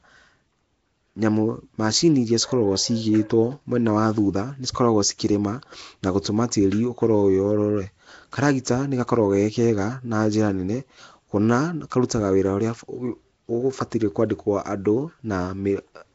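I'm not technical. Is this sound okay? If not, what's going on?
No. From start to finish the speech has a rough, hissy fuzz around it and a smeared, underwater quality, and nothing reaches above about 7.7 kHz, so it sounds dull at the top. This points to Nellymoser compression, likely from the old Flash microphone codec. It squeezes audio into small chunks with very few bits, so quieter parts of the sound get no detail and are filled in with noise, which causes that gritty halo.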